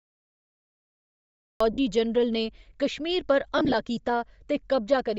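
Right from the start the speech has a breathy, grainy top end, with the upper band sounding noisy rather than detailed. That's likely Bluetooth LC3 compression at a low rate: the encoder zeroes much of the high spectrum and fills it with noise, which fits roughly 32 kbps with 10 ms frames.

Then there's a cut-off start. Nothing but digital silence until 1.60 s, where the speech jumps in mid-sound with no natural attack. The recording or stream simply began late.

Just after, at 1.73 to 1.78 s, there are lost LE Audio frames: a 50 ms gap where the decoder repeats the last spectrum with scrambled phase, so the speech briefly smears into a noisy buzz.

A second patch of lost frames runs from 3.58 to 3.74 s. About 70 ms goes missing in short bursts scattered over 160 ms, none longer than around 20 ms, so you hear a stuttery, grainy roughness rather than one clean dropout.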